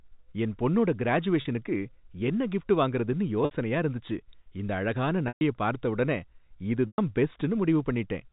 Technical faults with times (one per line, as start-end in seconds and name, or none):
1.41-1.45 packet loss with pitch repetition
3.45-3.51 packet loss with pitch repetition
5.28-5.41 packet loss with pitch repetition
6.87-6.98 packet loss with pitch repetition